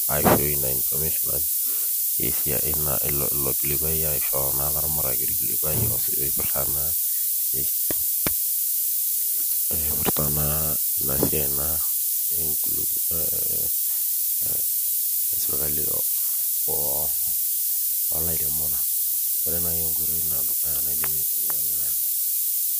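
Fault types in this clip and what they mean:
Low bit depth with noise shaping: a steady, thin hiss climbing toward the treble, only about 15 dB under the speech, which fits 4-bit rounding pushed upward.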